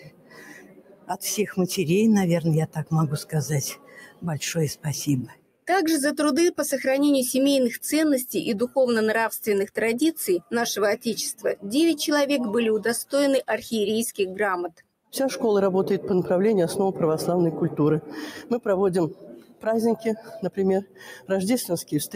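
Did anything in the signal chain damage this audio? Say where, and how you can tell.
Yes. The damage comes from call processing. A noise suppressor built for speech was left running on this audio, and it treats sustained and ambient content as noise to be removed. Throughout the clip the level keeps being pulled up and down by roughly 15 dB as the suppressor's gain tracks the material. Onsets get through, but held portions and decays are pushed down, so the sound pumps and thins rather than sitting at a steady level.

The clearest evidence is where the noise suppressor cut the sound hardest, with gain drops of about 20 dB at 0 to 1.59 s, 2.67 to 5.69 s, 14.69 to 15.14 s and 18.01 s to the end, and about 19 dB at 10.39 to 11.65 s. In the first two spans more than a second of material sinks. The middle two are briefer dips. Steady and fading passages collapse and their tails are cut short, while sudden transients in those same windows still come through.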